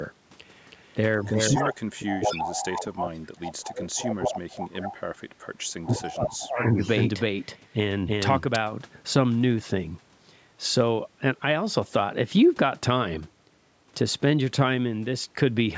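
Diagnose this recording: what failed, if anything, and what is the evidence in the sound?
Echo leak in the call processing: a delayed copy of the speech returns at 1.27–1.7, 2.11–2.64, 3.66–4.29, 4.63–4.89, 5.83–6.0 and 6.56–6.89 s, always 202 ms behind the original. Its level runs from about 20 dB below the speech up to about 5 dB below it. On a spectrogram it appears as a duplicate of the speech harmonics shifted 0.2 s to the right. This is likely a far-end speakerphone whose echo canceller failed to remove its own loudspeaker signal.

Speech suppressed in double talk, also in the call processing: from 1.3 to 5.0 s, and again from 5.86 to 6.8 s, the speech dips while the echoed speech overlaps it. The first stretch drops by as much as about 35 dB, and the second by about 25 dB. The waveform shows the envelope pushed down, and the spectrogram shows the speech bands fading toward silence, with nothing above 8 kHz at any point. 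The likely cause is an echo suppressor that could not tell the near talker from the loudspeaker echo and attenuated both.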